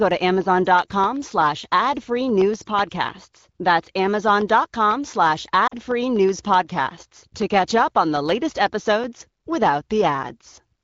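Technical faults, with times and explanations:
5.68–5.74 s, lost AMR speech frames: a 40 ms fade toward near silence as the wideband AMR decoder, lacking valid frames, repeats the last pitch and vocal tract settings with falling gain. The length fits two 20 ms frames, after which the HD Voice speech returns.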